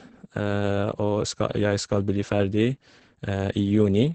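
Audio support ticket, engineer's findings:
Opus voice compression, full clip. Muffled, hoarse, slightly robotic speech; band ends near 8.8 kHz, so wideband SILK coding. Linear-prediction coder with coarsely quantised excitation; heavy damage fits a low rate, around 10 kbps. Probable component: encoder bitrate setting or bandwidth cap on the voice path.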